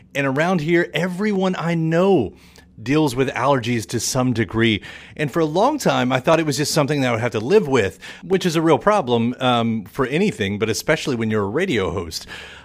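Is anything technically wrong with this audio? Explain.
Yes. Clock drift buffer slips are likely: two devices appear to run on clocks a few hundred parts per million apart, so the buffer between them periodically drops or repeats a small block of roughly fifteen samples. This causes a regular click in the speech about every 0.995 s, from 0.36 s to 12.3 s.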